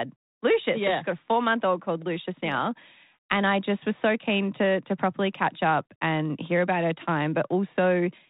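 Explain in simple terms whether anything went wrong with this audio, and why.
Nothing went wrong here: the speech comes across just as you'd expect from an ordinary phone-style line, with no dropouts, glitches or other faults to point to.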